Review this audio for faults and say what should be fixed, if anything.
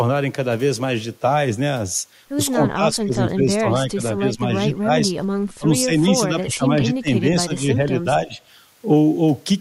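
The speech keeps ducking in three stretches: 2.52 to 5.12 s (about a second and a half of it affected, dipping roughly 15 dB), 5.58 to 7.1 s (under a second, the deepest at about 20 dB), and 7.44 to 8.39 s (a brief patch, about 10 dB down). That's likely speech suppressed in double talk, where the echo canceller can't tell the near talker from loudspeaker echo and turns both down. Tuning the canceller's double-talk detection so it stops suppressing when both sides speak should prevent it.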